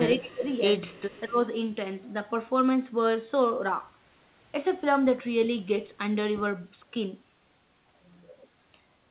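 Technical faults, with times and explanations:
0.2–0.44 s and 1.27–1.38 s, speech suppressed in double talk: the speech dips by roughly 15 dB for about a fifth and then a tenth of a second, likely because the echo canceller heard both sides at once and turned everything down.
0.42–0.46 s and 0.86–1.21 s, echo leak: a faint, delayed copy of the speech trails the original by 215 ms at about 30 dB below it, first as a brief scrap and then for a longer stretch, likely from loudspeaker sound the far end's canceller failed to remove.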